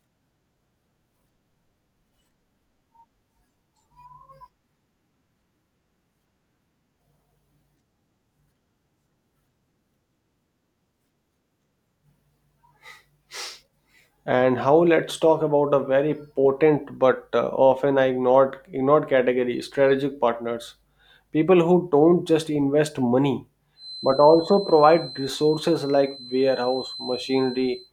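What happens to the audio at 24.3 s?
A feedback whistle runs from 23.74 s, just after "don't just invest money", to the end at 27.92 s: a thin, steady 4.1 kHz tone well below the speech, swelling and fading slowly in level, likely a loudspeaker-to-microphone loop held right at the edge of feedback.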